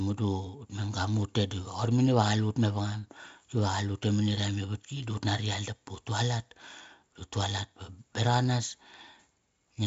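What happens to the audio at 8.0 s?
Nothing goes wrong at 8.0 s; the speech carries on intact through that moment.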